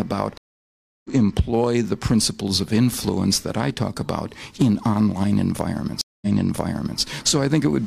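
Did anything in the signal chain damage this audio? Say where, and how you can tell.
Yes. Dropouts at 0.38 s (0.67 s gap, about 0.7 s skipped) and 6.01 s (0.2 s gap, 0.79 s repeated) are network stream reconnects, with a fresh decoder restarting mid-stream.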